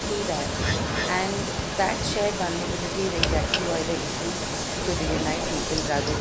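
From 0 to 1.11 s, and again from 1.28 s to the end, a copy of the speech trails it by about 0.3 s, loud at first and then noticeably quieter. This is echo leak, likely from a loudspeaker-side echo canceller letting its own microphone pickup return down the line.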